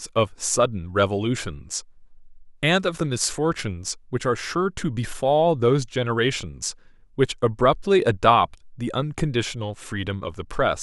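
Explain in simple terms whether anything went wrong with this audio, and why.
Nothing went wrong technically with this speech recording: the signal stays steady and intact throughout, with no dropouts, glitches or distortion to be heard.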